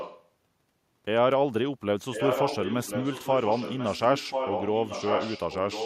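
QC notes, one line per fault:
0.00–0.27 s and 2.13–5.85 s, echo leak: a copy of the speech returns about 1.04 s late, first about 10 dB below, then about 5 dB below the direct speech. This is likely a far-end loudspeaker pickup that the echo canceller did not fully remove.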